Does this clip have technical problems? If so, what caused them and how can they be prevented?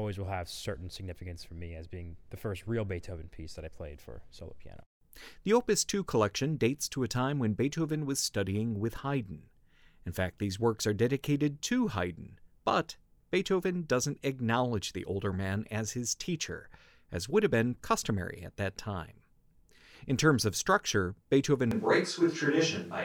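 Yes. A switch to a distant microphone occurs at 21.71 s and lasts to the end: the speech turns suddenly roomy and hollow, losing bass, with little change in level and room noise about 35 dB below the speech. The close microphone likely dropped out, leaving a farther one. Monitoring the close microphone and keeping a backup lavalier recording prevents this.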